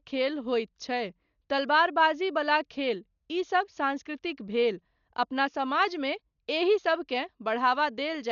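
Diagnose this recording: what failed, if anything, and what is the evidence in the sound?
Codec stage: likely heavy Dolby Digital compression. Bit starvation leaves nothing above 6.9 kHz and dither-filled gaps, so the speech sounds dull and rough-fluttered throughout, consistent with 48 kbps.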